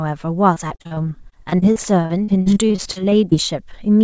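Speech with repeated packet loss (robotic sound) from 0.54 to 3.36 s: dozens of short dropouts, the longest about 43 ms, are each patched by extending the preceding sound, so roughly a quarter of that stretch turns choppy. The call path's band limit, with nothing above 8 kHz, points to a wideband codec such as G.722.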